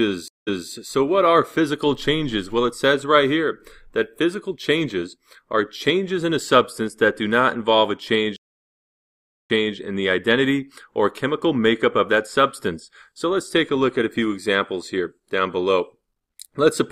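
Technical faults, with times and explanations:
0.28 to 0.70 s and 8.36 to 9.77 s, stream reconnect: the connection drops and the player goes quiet for 187 ms, then 1.13 s. A fresh decoder picks up from a resent burst, so the audio repeats from 232 ms and 279 ms back.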